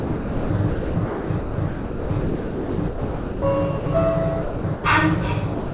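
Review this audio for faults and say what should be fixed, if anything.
From 0.00 to 3.42 s the sound is repeatedly cut in and out: about 2.7 s of it is swapped for comfort noise. A second stretch of the same sound chopped by the voice detector runs from 4.42 to 4.84 s, with about 0.32 s replaced. The likely cause is the sender's voice activity detector toggling between sending and muting because it misreads these non-speech sounds as background.

Twice the sound drops out entirely and steady comfort noise takes over. The first gap is 80 ms, from 3.78 to 3.86 s. The second is 200 ms, from 5.54 s to the end. This sound dropped by the voice detector likely comes from the detector judging a quieter passage to be background and stopping transmission until something louder triggers it again. Throughout, nothing above 4 kHz comes through, which fits a narrowband G.711 call path.

To prevent this, disable voice activity detection and discontinuous transmission on the sending side, or lower its threshold, so that non-speech audio is always sent.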